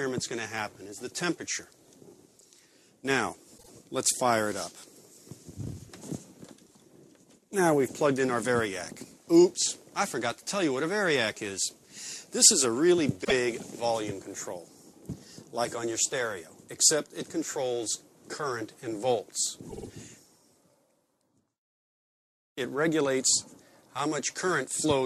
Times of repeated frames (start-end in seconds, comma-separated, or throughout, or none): 3.57-3.70, 13.23-13.32, 19.68-19.87